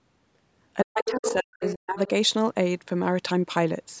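From 0.83 to 1.98 s both ends seem to be talking at once, and the echo canceller has likely mistaken the talker for loudspeaker echo and turned it down. This is speech suppressed in double talk: over about a second in total the voice dips and breaks up, falling by roughly 40 dB at its deepest.

During and just after that span, the same canceller has likely left part of the far end in the microphone signal, so the other side's voice leaks through in three short scraps. The first, from 1.07 to 1.34 s, sits roughly 5 dB under the talker. The second, from 1.62 to 1.74 s, is around 10 dB under. The last, from 1.98 to 2.08 s, is faint at about 25 dB down.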